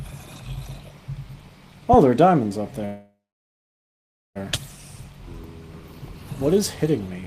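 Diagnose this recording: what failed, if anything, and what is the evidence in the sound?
A call audio freeze runs from 2.85 s to 4.38 s, and the stage is most likely the network feeding the receiver's jitter buffer. At 2.85 s the last sound is held as a brief fading buzz, then about 1.2 s of silence follows before the audio resumes exactly where it stopped, with nothing lost but about 1.5 s of added delay. On a spectrogram this shows as a smeared, decaying band followed by a blank gap; the waveform flattens to near zero.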